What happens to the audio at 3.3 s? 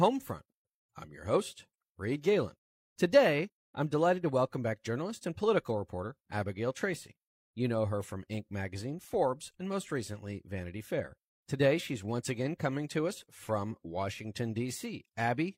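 Nothing goes wrong at 3.3 s; the audio carries on intact through that moment.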